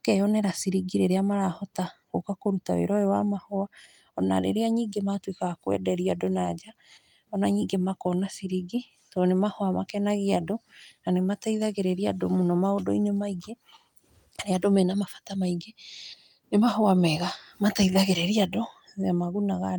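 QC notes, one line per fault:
No faults found in this speech clip. Nothing in it calls for a QC entry.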